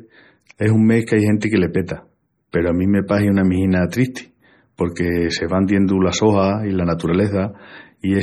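Speech throughout sounds watery and swirly, with dulled treble and metallic chirps on s sounds, likely the result of heavy MP3 compression at a low bitrate around 32 kbps. Two short hisses smear the attacks that follow them: pre-echo at 1.41 s, between "es un mes qu'ai" and "que le", and at 2.52 s, just before "peru a". In each case quantisation noise spread across the codec block leaks about 18 to 19 ms ahead of the onset.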